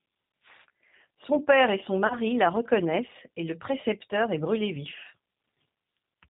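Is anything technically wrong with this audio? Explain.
Yes, there are two faults. Throughout, the speech sounds band-limited, slightly rough and synthetic, with a plainly audible coarseness. That is the G.729 codec at work, which fits an 8 kbit/s stream. It rebuilds each 10 ms frame from a vocal-tract filter, a pitch predictor and a few pulses, and passes nothing above 4 kHz.

From 2.07 to 2.16 s, between "père et son" and "la reconnaissent et le", the speech is briefly stretched out and fades, then recovers weakly. This is VoIP packet loss concealed by the speech codec. About 30 ms went missing, which fits a single lost packet. The decoder extrapolated from its last pitch and filter with falling gain, and because each frame builds on the previous one, the distortion lingers after the gap.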